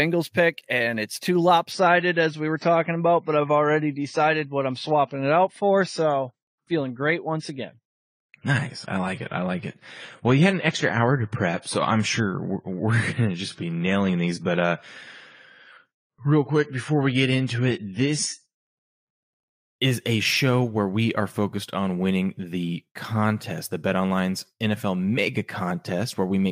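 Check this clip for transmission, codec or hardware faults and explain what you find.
There's one fault here: the clip drops to an adaptive stream at a lower bitrate from 1.72 s to 19.72 s. The connection evidently slowed, so the player switched to a leaner encode for that stretch, then climbed back. You hear the speech lose its top end, with nothing above 10 kHz, and pick up codec artefacts. The switch is abrupt both ways with no gap, which fits a jump from around 96 down to about 24 kbit/s AAC.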